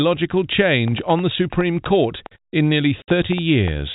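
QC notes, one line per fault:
0.88–3.69 s, train of clicks: about 15 short, similar pulses at an irregular pace of about 4.3 per second, peaking slightly above the speech level and audible in pauses too. The likely cause is interference or a faulty connection. Unlike dropouts, nothing is removed; the ticks sit on top of continuing sound.
3.02–3.08 s, packet loss filled with silence: a 60 ms hole where the speech drops to dead silence, which fits three lost 20 ms packets. Here the sound is removed outright, not overlaid, and the gap holds nothing of the 4 kHz-limited telephone-band signal around it.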